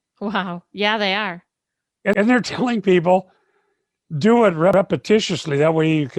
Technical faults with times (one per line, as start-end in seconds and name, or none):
2.13-2.23 overlapping chunks
4.73-4.83 overlapping chunks